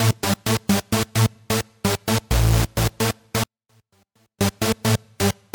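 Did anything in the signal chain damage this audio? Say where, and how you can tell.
Yes. There is an audio dropout to a faint residue from 3.44 s to 4.41 s. For nearly a second, the sound collapses abruptly rather than fading. Only a faint leak remains, roughly 40 dB below the normal level. The path after the break stayed live, so this is not digital silence. The likely cause is an intermittent analogue connection between source and input, briefly breaking the signal while the downstream chain kept running.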